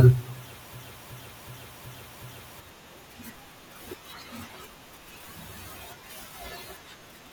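From 0.74 s to 2.60 s, a system hang loop: the driver froze while the hardware kept replaying one 0.37 s ring buffer, consistent with a 16384-sample buffer. Five exact repeats at 2.69 Hz produce a skipping-record effect, and roughly two seconds of speech are lost.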